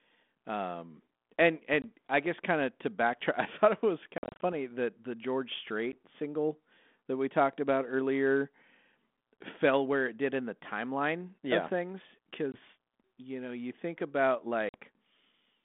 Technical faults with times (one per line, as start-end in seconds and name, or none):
1.82-1.85 packet loss on an ADPCM call
4.18-4.54 packet loss on an ADPCM call
5.92-5.97 packet loss on an ADPCM call
9.37 packet loss on an ADPCM call
12.52-12.57 packet loss on an ADPCM call
14.69-14.75 packet loss on an ADPCM call